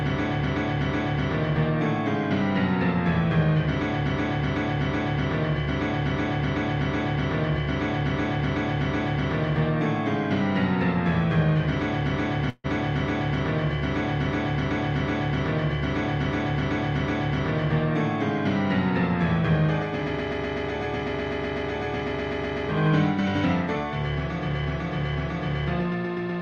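From 12.49 to 12.66 s, delayed packets likely drained the jitter buffer, causing a call audio freeze: 146 ms of fading fill is inserted, then the sound resumes with nothing lost.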